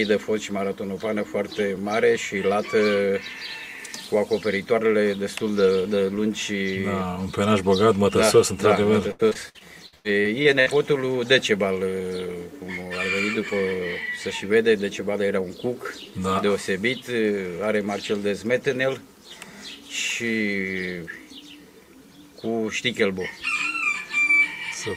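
From 9.11 to 10.68 s there's repeated packet loss: about ten short holes, the longest near 100 ms, patched by stretching prior audio, so it turns choppy and robotic.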